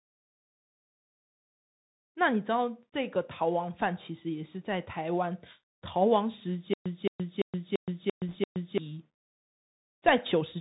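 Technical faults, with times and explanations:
Throughout, Bluetooth CVSD headset codec: The speech is confined to a narrow band with nothing above 4 kHz, which fits a 64 kbps CVSD link. The codec sends one bit per sample, signalling only up or down, with an adapting step size. Loud, bright sounds rise faster than the step can follow, so they distort, s sounds come out scratchy, and a fine granular hiss sits under everything. The call microphone processing's bass roll-off is ordinary and not part of the damage.
6.74 to 8.78 s, stutter with silent gaps: A burst of about 219 ms plays, then about 122 ms of dead digital silence follows. The cycle repeats six times at an even 341 ms spacing. The likely cause is a player or stream stall: at each retry it replays its last fragment and then runs dry. Whatever audio belonged in those two seconds is missing, replaced by the same repeated scrap.
8.29 to 8.36 s, bit errors on a Bluetooth voice link: Within the stutter, a brief rushing, crackly noise rides on the sound, fitting an error rate of around one percent. 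CVSD gives every bit the same small weight, and its decoder lets mistakes fade out quickly. For that reason, flipped bits produce a hissy roughness rather than sharp loud clicks, and the disturbance stays short instead of spiking.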